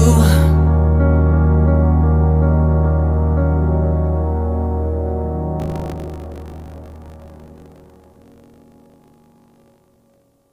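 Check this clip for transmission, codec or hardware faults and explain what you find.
One fault is present. From 5.58 s to the end, buffer tearing: writer and hardware reader slipped, so each 20 ms period holds roughly a tenth of audio around 40 ms stale, giving a 50 Hz rattling buzz.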